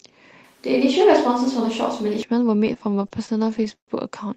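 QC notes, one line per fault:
0.44–2.23 s, switch to a distant microphone: the speech suddenly turns roomy and hollow, with the low end thinned out, then snaps back just as abruptly at 2.23 s. The level barely changes, but there's a bed of room noise roughly 35 dB under the speech. That sudden change in tone points to the close mic dropping out, with a further-off mic, likely the camera's, taking over.
2.55–3.90 s, repeated stalls (stutter): the speech drags and hiccups through this stretch, with 19 short holds where the last bit of sound gets stretched out. Together they come to 322 ms, about a quarter of the span, and the longest is 129 ms, which fades out. Nothing is actually lost. It's the jitter buffer running dry over and over as packets arrive late, and the receiver filling each wait until playback can resume.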